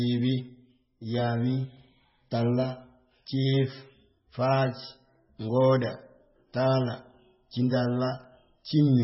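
MP3 compression damage runs through the whole of this speech clip, and it is heavy. Nothing is present above about 5.6 kHz, so the treble stops abruptly at a fixed ceiling and s sounds lose their edge. Quieter detail swirls and warbles as weak frequency components switch on and off between frames, giving a watery texture, and consonant onsets smear. The likely cause is a very low MP3 bitrate, around 16 kbps, which fits this heavy damage.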